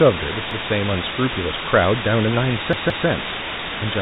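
A constant, even hiss, roughly as loud as the speech itself, runs throughout without distortion. This is low bit depth with dither, which points to about 3 bits with noise added before rounding. At 0.51 s a 0.17 s stretch stutters, playing twice with a hard join. At 2.73 s another plays three times. This is a repeated buffer, with late audio replaced by a rerun of the last 8192-sample buffer, and nothing is skipped.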